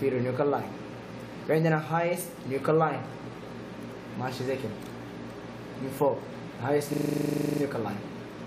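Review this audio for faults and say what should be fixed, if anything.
A system hang loop runs from 6.93 to 7.61 s: one 40 ms piece of audio repeats 17 times at 25 Hz, a rapid stutter, as the output kept cycling a 40 ms ring buffer while the system stalled. Essentially no audio is lost. To prevent it, have a watchdog mute or drain the output when the buffer stops refilling.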